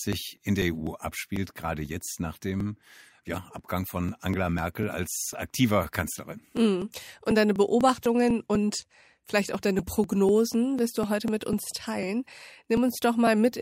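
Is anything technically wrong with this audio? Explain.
Yes. From 0.13 s to 13.52 s the speech has periodic USB or driver dropouts. Roughly every 0.25 s, about 2 ms of audio is skipped because the bus or driver stalls, giving around fifty evenly spaced ticks. The waveform shows small regular discontinuities, and the spectrogram shows thin vertical broadband lines.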